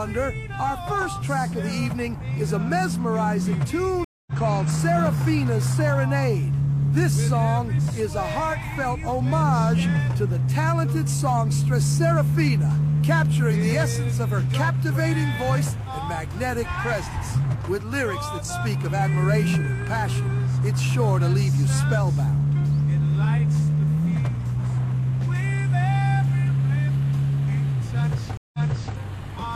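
At 4.04 s a stream reconnect drops the sound for 227 ms. It resumes about a fifth of a second later, so a short stretch is skipped. At 28.37 s another reconnect leaves 164 ms of silence, then restarts 418 ms earlier, repeating material.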